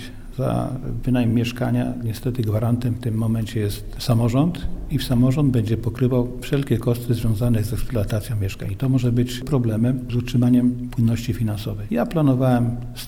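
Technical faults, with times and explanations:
No technical faults can be heard anywhere in this recording.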